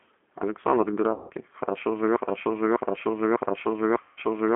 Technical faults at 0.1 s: G.729 codec

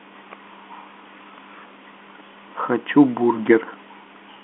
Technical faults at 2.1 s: none

